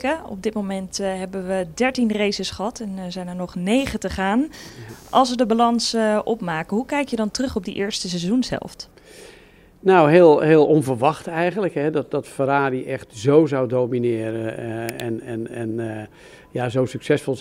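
From 3.78 to 7.72 s, a faint buzzing chirp pulsing around 200 Hz: computer activity noise, where computer load changes shift the circuit's shared ground.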